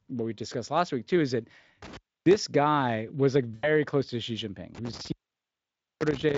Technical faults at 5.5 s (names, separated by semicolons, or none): intermittent contact